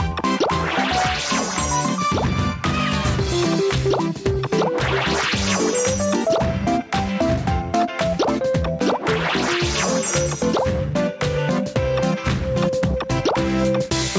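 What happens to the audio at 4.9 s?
At 4.9 s the clip shows gain pumping, present throughout the whole clip: the input gain was likely set far too high, so a fast limiter clamps down on each loud sound. The gain swings by around 10 dB, leaving the sound squashed.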